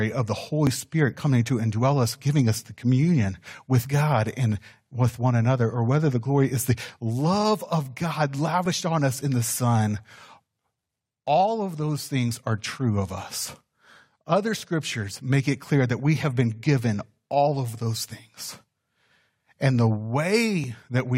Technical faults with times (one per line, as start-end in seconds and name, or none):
0.67 overlap between stream segments
8.66 overlap between stream segments
12.66 overlap between stream segments
20.64 overlap between stream segments